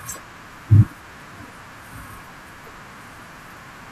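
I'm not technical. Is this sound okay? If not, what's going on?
Yes, nothing in this recording points to a technical problem with how it was captured, stored or played back.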